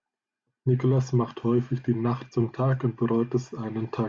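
Nothing in the recording stood out as a technical problem on listening.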